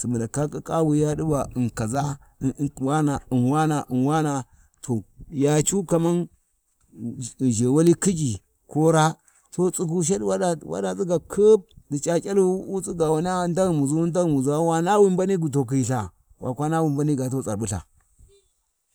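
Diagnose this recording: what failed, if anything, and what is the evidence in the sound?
Nothing failed at any stage of the chain, and the speech carries no audible evidence of a fault anywhere from capture through playback.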